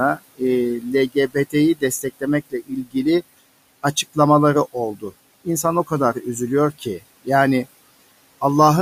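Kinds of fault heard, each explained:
Noise suppressor artifacts: throughout, the background pumps down between phrases and swells under speech, as the suppressor cuts steady noise by about 19 dB.
Speech cut by the noise suppressor: soft sounds and endings turn faint or swallowed, drops up to about 21 dB, because the suppressor mistook quiet speech for the room noise.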